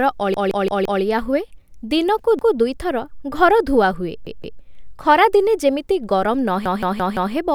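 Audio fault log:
Throughout: sample clock jitter. The converter's clock wanders by under a microsecond, so each sample is taken slightly early or late, and the error is largest where the speech waveform changes fastest. The result is a faint hiss or grain, roughly 50 dB below the speech, that rises on loud syllables and sibilants and disappears in the pauses. Unlike a steady noise floor, it follows the signal and is absent when there is no sound.
0.34–1.02 s, 2.39–2.56 s, 4.27–4.61 s, 6.66–7.34 s: repeated buffer. Each time, a piece about 171 ms long plays again with a hard join at each restart, which fits an 8192-sample buffer replayed while new audio was late. It plays four extra times before "ହୁଏ ଦିନକୁ ଦୁଇଥର ଘର", once between "ହୁଏ ଦିନକୁ" and "ଦୁଇଥର ଘର ଧୁଆ ହୁଏ", twice before "ଖରା ଦିନେ ଯେମିତି", and four times near the end. Nothing is lost, because the repeats are inserted into the audio. 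This is what separates it from a dropout, which leaves a gap.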